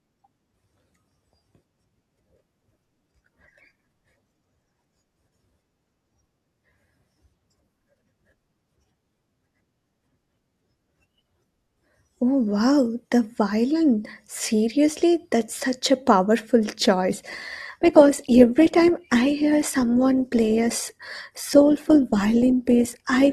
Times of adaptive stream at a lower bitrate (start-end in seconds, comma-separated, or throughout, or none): 17.15-23.33